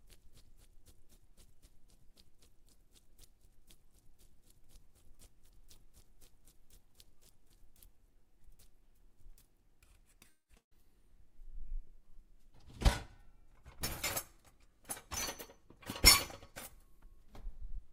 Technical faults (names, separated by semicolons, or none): call audio freeze; burst of packet loss; jitter buffer speed-up